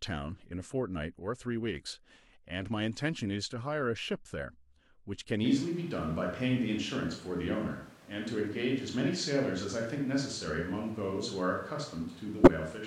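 From 5.46 s to the end, the speech abruptly turns roomy and hollow, losing its low end, with background noise now sitting roughly 25 dB under the speech, though the overall level stays about the same. That sudden change in character, with no return, is a switch to a distant microphone: the close microphone's signal likely dropped out, leaving a pickup farther away that captures more of the room's reflections and ambient noise.

Between 12.43 and 12.48 s, a short, harsh burst like a chirp or squeak cuts through, peaking fairly loud at around -10 dBFS. This is a corrupt frame decoded. Flipped bits inside the compressed data were played anyway, so misread gains and codes threw energy into the wrong frequencies. The roughly 50 ms span fits a handful of consecutive damaged frames.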